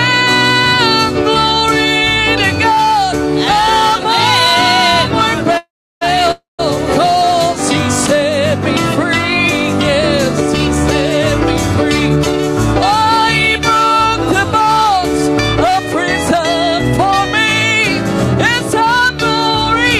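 The audio has two call audio freezes close together and one jitter buffer speed-up. The first freeze runs from 5.57 to 6.03 s. The sound stalls and its last moment is drawn out as a fading buzz, then about 330 ms of silence. The second runs from 6.31 to 6.61 s, with about 150 ms of silence. The likely cause is delayed packets draining the jitter buffer. The receiver filled the wait, 438 ms and 275 ms, and then resumed where it stopped. Nothing is lost, but the delay grows by those amounts. From 11.88 to 12.34 s the audio plays at 109% speed with unchanged pitch, so it sounds briefly hurried. This is the jitter buffer speed-up. The buffer held more than its target, so the receiver cut short pitch-period slices, roughly 50 ms in total, to bring the delay back down.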